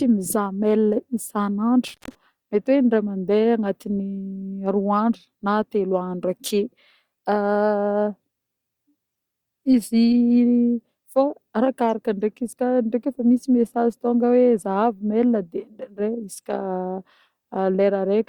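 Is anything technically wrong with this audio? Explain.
Yes. From 1.88 to 2.15 s the speech cuts out with crackle at both edges, leaving faint hiss: an intermittent contact, a loose connection opening for about 140 ms.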